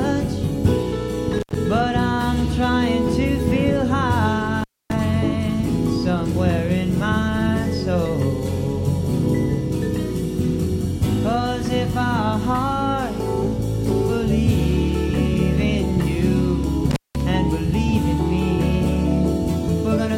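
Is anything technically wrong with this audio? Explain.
Yes, there's an intermittent contact: the sound crackles and drops out at 1.38 to 1.55 s, 4.60 to 4.94 s, and 16.91 to 17.21 s, as a loose connection briefly opens for about 84, 261 and 188 ms.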